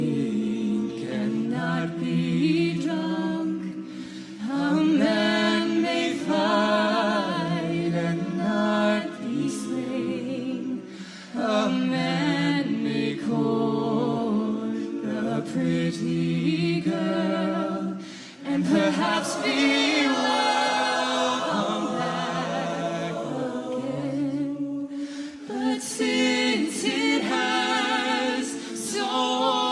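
Nothing technically wrong can be heard in this audio. There are no faults to time or trace to a cause.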